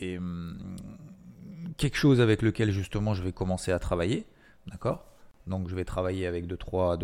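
At 5.31 s, after "commencer à travailler d'accord", the speech drops out for 30 ms: a gap at a join of encoded pieces, where untrimmed encoder padding was left in.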